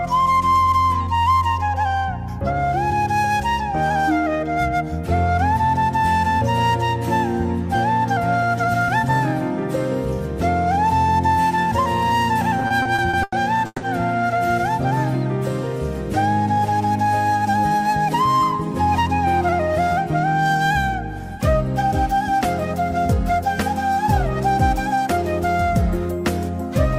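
From 12.59 to 13.84 s, packets reached the receiver late or more slowly than they were being played out, so its jitter buffer kept running dry, causing repeated stalls (stutter). Each time, the receiver stretched the last sound to bridge the wait, fading it during the longer holds, up to 160 ms. Eight such holds add about 390 ms of filler, roughly a third of that stretch. Nothing is lost, but the audio drags and stutters.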